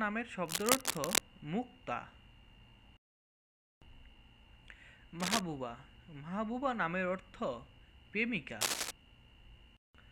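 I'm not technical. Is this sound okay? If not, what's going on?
No. There are two kinds of problem.

The first is cable scratch noise. You hear a rough scratching or rustling laid over the sound, a bit louder than the sound itself. It happens from 0.46 to 1.20 seconds, from 5.20 to 5.41 seconds, and from 8.61 to 8.91 seconds. The likely cause is a worn cable, plug or knob being moved. Its connection flickers, and that adds bursts of noise.

The second is a dropped buffer, also called an overrun. At 1.05 seconds and again at 4.68 seconds the sound jumps forward slightly. A tiny slice, a few thousandths of a second, is missing. The likely cause is the recording program falling behind. The equipment overwrote that slice before the program saved it, so the pieces on either side were joined.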